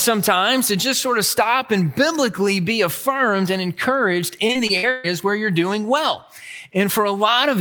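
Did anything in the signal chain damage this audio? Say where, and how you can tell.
Yes, the network stage did. From 4.47 to 5.06 s there's repeated packet loss (robotic sound): five separate holes in about 0.6 s, the longest around 131 ms. The receiver papered over roughly 244 ms by stretching the last good sound forward, but about 260 ms just went missing, and concealment covers around 42% of that stretch. That's why it turns choppy there, with pieces missing.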